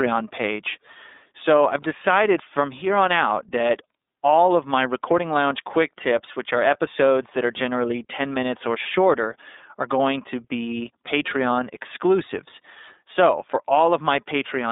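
Speech runs through the iLBC codec for its whole length, giving a narrowband, slightly rough and synthetic tone. A spectrogram shows nothing above about 3.8 kHz, with the line band of 250 Hz to 3.7 kHz, and coarse 30 ms frame-to-frame texture that fits the 13.33 kbps mode. Hard clipping follows "quick tips which are," from 6.67 to 6.72 s, where peaks just reach the converter's limit and are cut flat. It is a brief crackle, seen as flattened waveform tops and a thin vertical smear of harmonics on the spectrogram.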